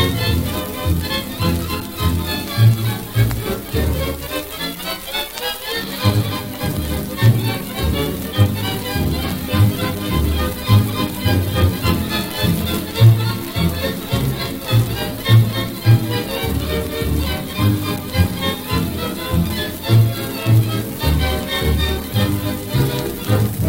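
Damaged data in a compressed stream at 4.79 s: corrupted bytes throw the decoder off sync, so it produces a brief blip while hunting for the next valid frame header.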